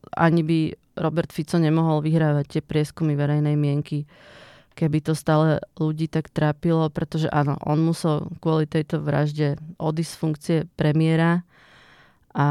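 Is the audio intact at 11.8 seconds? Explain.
Yes, the audio is intact at 11.8 seconds, with no audible fault at that moment.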